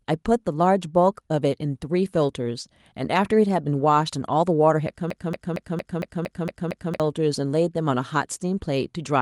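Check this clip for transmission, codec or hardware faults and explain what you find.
One fault is present: a broken-record loop from 5.10 to 7.00 s. The playback or stream likely stalled and kept resending its last buffered fragment, so a 0.23 s slice of speech repeats eight times back to back, and the speech due in that span never plays.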